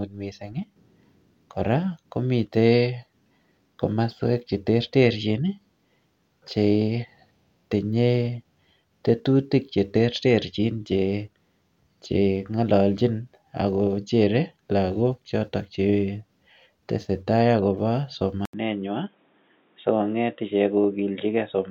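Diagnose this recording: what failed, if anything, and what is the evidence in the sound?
Right after "lakok choto chetesetai akobo", at 18.45 s, the speech turns dull and boxy through to the end. An 80 ms gap marks the switch, nothing is left above 3.8 kHz, and a new, faint noise floor sits well below the speech, while loudness stays about the same. This points to the input switched to a poorer device at the driver and device-selection stage, likely a change to a narrowband headset call profile or a lesser microphone.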